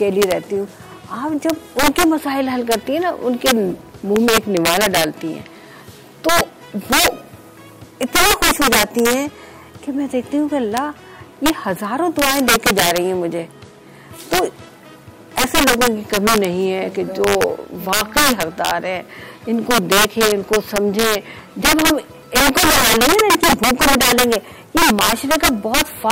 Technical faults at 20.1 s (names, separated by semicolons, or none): integer overflow